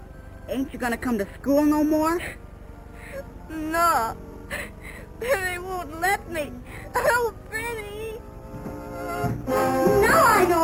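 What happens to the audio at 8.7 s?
At 8.7 s there is a bright, metallic fizz that rises and falls with the sound, about 18 dB below it. This is imaging from sample-and-hold upsampling, present throughout: the audio was raised from 12 kHz to 48 kHz by repeating samples unfiltered, mirroring the spectrum into 6 to 12 kHz and above.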